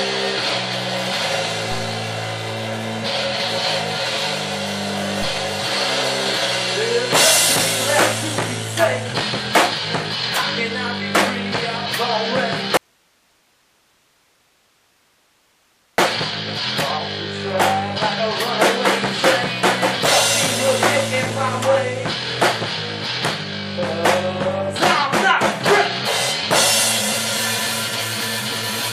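An audio dropout to a faint residue runs from 12.77 to 15.98 s. The signal likely broke off while the path stayed live, leaving about 3.2 s of hiss far below normal level.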